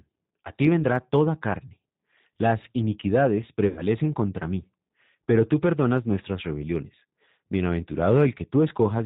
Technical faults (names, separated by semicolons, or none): G.729 codec; VoIP packet loss concealed by the speech codec